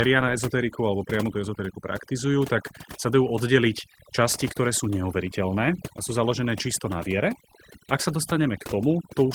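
This speech clip suffers from overdone noise removal throughout. An over-aggressive noise reducer has pulled individual frequency bands down to nothing wherever they sat close to its noise estimate, so the background collapses into near silence dotted with twinkling specks, and the softer parts of the voice are gated away with it. What separates this from low-bitrate codec damage is that the top end stays open to about 20 kHz, without a muffled or band-limited sound.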